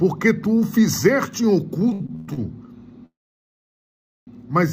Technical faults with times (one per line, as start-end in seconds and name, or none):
1.89-2.40 repeated stalls (stutter)
3.06-4.29 call audio freeze